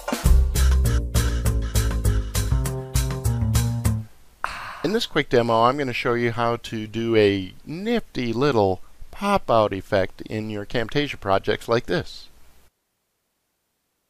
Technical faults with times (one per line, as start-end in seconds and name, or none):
none